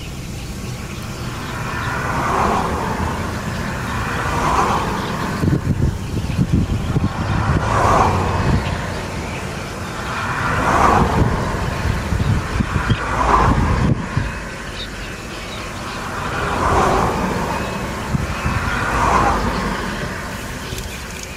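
No technical faults can be heard anywhere in this audio.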